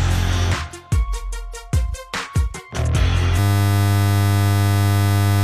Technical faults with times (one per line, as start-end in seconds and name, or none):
3.39-5.43 system hang loop